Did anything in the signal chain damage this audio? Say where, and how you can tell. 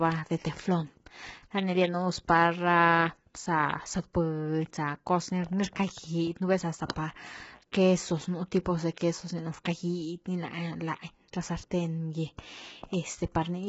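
Yes, at the codec stage, throughout the clip. The speech is rough and grainy, with noise between the harmonics and nothing above 7.7 kHz. The likely cause is low-delay AAC compression (AAC-ELD), whose short frames resolve pitch poorly. The heavy damage fits a bitrate near 16 kbps.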